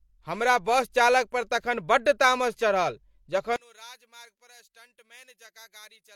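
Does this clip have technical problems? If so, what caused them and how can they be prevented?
Yes. From 3.56 s to the end, the speech suddenly drops by about 27 dB, leaving only what differed between the two sides. The likely cause is one channel inverted: with one channel's polarity reversed, everything the channels share cancels when they are summed to mono. Checking channel polarity and listening to a mono fold-down before the downmix would prevent it.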